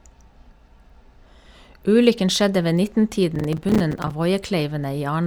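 From 3.36 to 4.11 s there is processor overload crackle. Audio buffers of around 5 ms miss their deadlines about twenty times. Each miss drops a short silent gap with hard edges. Together they form a gritty burst of crackle over the speech.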